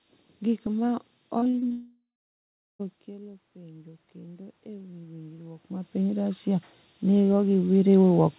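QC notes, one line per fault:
Throughout, low bit depth with noise shaping: the audio is carried at an effective 6 bits, so the rounding error sits only about ten decibels below the signal. The noise shaping feeds that error back so it is pushed upward in frequency. The result is a steady, thin hiss that climbs toward the top of the band, which the call path limits to 4 kHz. The hiss is most exposed in quieter passages and never drops away.
1.38 to 1.72 s, repeated packet loss (robotic sound): five short holes open in quick succession, the longest about 40 ms, with about 140 ms missing in total. The receiver patches each hole by extending the last fragment of sound, so about 41 percent of this span is concealment rather than real audio. Because the holes come back-to-back, the stretch sounds choppy, with pieces dropped out.
1.72 to 2.81 s, long network dropout: just after the choppy stretch the audio stops arriving for about 1.1 s. 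The last sound is drawn out as a buzz or hiss that fades, and roughly the final 0.74 s is silence. The sound resumes at 2.81 s with the intervening material gone rather than delayed, and the likely cause is a network outage that the jitter buffer could not cover.
3.05 to 8.38 s, automatic gain rising: shortly after the talker shifts away from the microphone around 3.0 s, with a further move near 5.5 s, the input level falls by about 15 dB. The automatic gain control responds by raising its gain gradually rather than at once. Voice and room noise therefore swell together over the rest of the clip.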